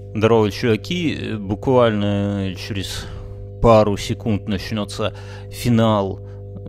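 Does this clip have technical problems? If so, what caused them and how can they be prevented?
Yes. A steady low 50 Hz drone with some low harmonics runs under the speech for the whole clip, sitting only about 15 dB below it. This is mains hum, where a ground loop or nearby transformer couples the power line into the signal. Prevent it by breaking ground loops, using balanced cabling, and keeping audio lines away from power transformers.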